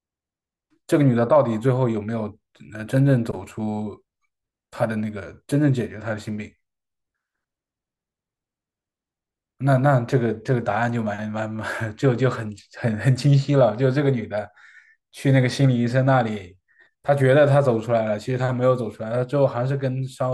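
Listening to this speech recording, nothing technical stood out at any point.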